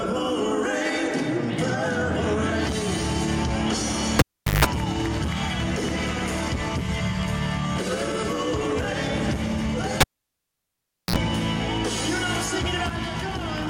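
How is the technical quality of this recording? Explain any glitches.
Two cable pulled and plugged in events: at 4.19–4.65 s (0.41 s of near silence, 0.16 s of 50 Hz buzz) and 10.01–11.16 s (1.1 s of near silence, 54 ms of 60 Hz buzz). Each shows a pop spike, a flat waveform gap, mains hum lines while only the plug tip touches, then a second spike.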